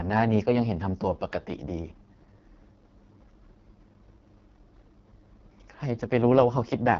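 Speech coded throughout with the AMR wideband (HD Voice) codec at its lowest rate, likely 6.6 kbit/s, so it sounds rough and raspy. A spectrogram shows a hard ceiling near 7.4 kHz, smeared harmonics below 6.4 kHz and a noisy, unstructured band above it.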